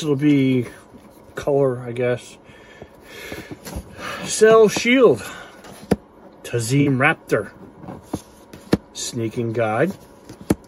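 At 4.35 s (about 36 ms) and 6.81 s (about 62 ms), a corrupt frame concealed: the decoder caught damaged AAC data and covered it, rather than passing on the squeak of undetected errors. The lengths fit one, then two, frames.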